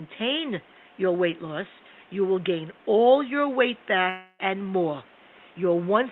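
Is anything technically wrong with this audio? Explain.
Yes. There is a long network dropout from 4.09 to 4.41 s, right after "gain all your weight" and before "and more". The speech stops and the final sound is stretched into a fading buzz lasting about 0.3 s, followed by roughly 20 ms of near-silence before the audio resumes with about 0.3 s of content missing. This is likely a stall in packet delivery, with the receiver concealing the gap by extending the last sound until it ran out. Low room noise, about 29 dB below the speech, is audible under the audio.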